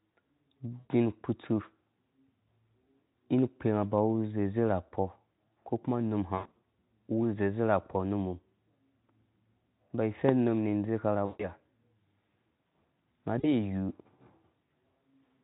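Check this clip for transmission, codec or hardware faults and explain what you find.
Two kinds of fault are present: repeated VoIP packet loss concealed by the speech codec, and one loud pop.

The packet-loss concealment occurs at 0.80–0.89, 6.36–6.65, 11.25–11.49 and 13.39–13.71 s. The gaps total about 100, 200, 140 and 40 ms, and the second is scattered across 280 ms. In each, the decoder extrapolates its last pitch and filter at falling gain, so the speech smears into a fading buzz or coloured noise, and it stays weak briefly afterward. The underlying narrowband coding sounds consistent with a Speex stream near 18 kbps.

The loud pop at 10.29–10.31 s is a single sharp transient, about 15 dB above the speech, most likely from a voltage spike such as a switch or static discharge. The speech runs on underneath without smearing or fading, which separates it from the concealment.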